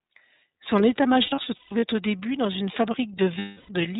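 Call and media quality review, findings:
iLBC codec, full clip. Band-limited at 4 kHz, slightly rough, synthetic texture on speech, plainly audible. Narrowband VoIP codec coding each frame's excitation independently; character fits the 30 ms, 13.33 kbps mode. Unlike a plain telephone band-pass, the graininess is in the voice itself, not just missing highs.

Lost iLBC frames, 1.22–1.83 s. Scattered concealment over about 0.6 s, roughly 330 ms total, longest run around 150 ms. Decoder repeats the last pitch cycle plus noise, giving held buzzy vowels.

Lost iLBC frames, 3.39–3.70 s. One continuous 300 ms gap, held breathy vowel fading out. Not silence or a hard dropout: filled, then clean recovery almost at once, since frames carry no dependency on earlier ones.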